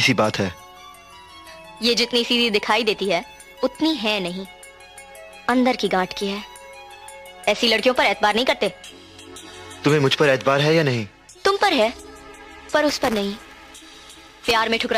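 Near the end, from 12.89 s to 14.51 s, the audio picks up a robotic rattle buzzing at 200 Hz. That's buffer tearing: the writer and the hardware reader have drifted out of step on the ring buffer, so in every 5 ms period, which fits a buffer of about that length, a small slice plays back audio roughly 10 ms stale, with hard joins at both edges. Those repeating splices make the buzz, and it rides along with the signal.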